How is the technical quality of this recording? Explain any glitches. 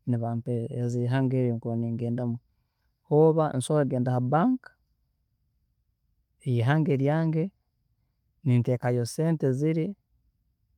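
No technical faults can be heard in the recording. The speech runs without any glitch that needs explaining.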